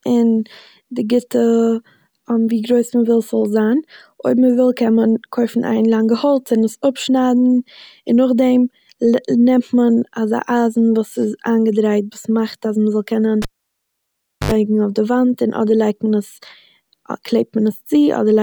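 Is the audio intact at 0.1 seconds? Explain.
Yes, at 0.1 seconds the audio is intact, with nothing there to point to a technical fault.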